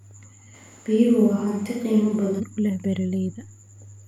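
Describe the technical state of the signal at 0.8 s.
A switch to a distant microphone spans 0.56 to 2.39 s. The speech sounds abruptly roomy, hollow and thin, likely because the close microphone dropped out.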